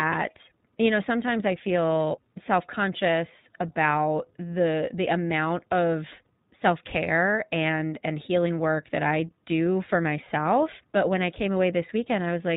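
Speech, passed throughout through the iLBC codec. The audio is band-limited to narrowband, with nothing above 4 kHz, so it sounds dull and telephone-like. Each frame's excitation is coded independently, leaving a plainly audible rough, synthetic texture that points to the 15.2 kbps mode with 20 ms frames.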